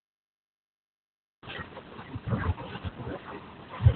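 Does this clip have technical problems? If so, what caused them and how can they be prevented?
Yes. Opus voice compression affects the whole clip. Nothing is heard above 4.2 kHz, so the speech sounds muffled and thin. It is also hoarse and slightly robotic. The coder has narrowed the band and coded the voice coarsely, which fits a very low bitrate near 8 kbps. Encoding at a higher Opus bitrate, so the coder keeps a wider band, would prevent this.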